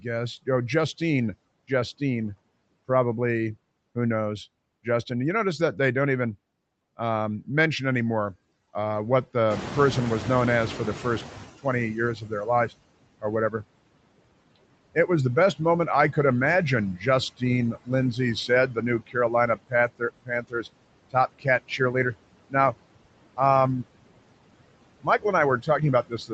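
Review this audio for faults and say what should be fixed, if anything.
The background noise dips between phrases and swells under the speech throughout. These are noise suppressor artifacts: the suppressor removes about 21 dB of what it judges steady noise, band by band and frame by frame, leaving an unstable residue. Prevention: use a gentler suppression depth with smoothing across frames and bands.

At 9.5 s the room noise jumps by about 18 dB, and from 9.5 to 12.7 s it comes through louder before settling. This is the noise suppressor catching up: its noise estimate took about 3.2 s to adapt, and only then applied its reduction of about 16 dB. Prevention: let the noise estimator track sudden rises faster.

Parts of the speech sound swallowed or faint at 11.62 to 13.64 s (deepest drop about 20 dB, roughly 0.4 s in all), 14.56 to 15.6 s (about 16 dB, only a brief moment), 16.97 to 21.94 s (about 22 dB, around a second in all) and from 25.02 s to the end (about 18 dB). 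This is speech cut by the noise suppressor: it mistook quieter speech for the raised background noise, which sits only about 13 dB below it, and pulled it down too. Prevention: add voice-activity protection and cap the attenuation applied during speech.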